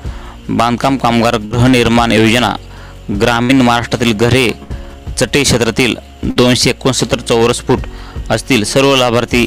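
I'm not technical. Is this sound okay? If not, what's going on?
No. At 1.45, 3.43, 4.63 and 6.30 s there's a burst of packet loss: about 60 ms goes missing and is covered by a briefly held, fading sound rather than silence.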